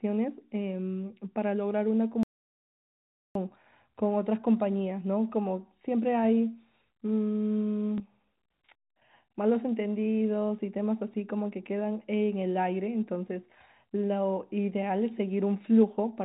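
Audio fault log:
2.23–3.35 s, audio dropout to silence: about 1.1 s of total silence with no room tone, likely because the input was lost while recording continued.
7.98 s, packet loss with last packet repeated: one 20 ms packet was lost and the previous one replayed, leaving a small blip.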